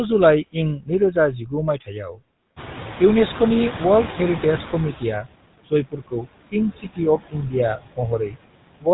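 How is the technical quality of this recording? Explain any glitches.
The recording is speech carried over a degraded phone-style path, with processing faults throughout and several at specific times.

Noise suppressor artifacts, throughout: the suppressor pulls down bands it judges to be steady noise, by about 21 dB, one short frame at a time. The background dips between phrases and swells back under them.

GSM full-rate codec, throughout: this early phone codec rebuilds speech from a vocal-tract model driven by spaced pulses, which fits a 13 kbps full-rate stream. Nothing above 3.9 kHz survives, and the damage is plainly audible as a buzzy, gravelly roughness on the voice.

Speech cut by the noise suppressor, 0.53 to 2.22 s and 4.98 to 5.27 s: the suppressor mistook parts of the speech for noise and turned them down, by up to about 19 dB in the first stretch and about 12 dB in the second. 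About half a second in total is affected in the first and a brief moment in the second, and the speech turned down there sounds swallowed or faint.

Noise suppressor catching up, 2.56 to 5.18 s: the room noise jumps by about 17 dB at roughly 2.5 s, and the suppressor's noise estimate lags behind it. The louder background comes through with less reduction at first, then sinks over about 2.6 s as the estimate adapts, ending at about 15 dB of reduction.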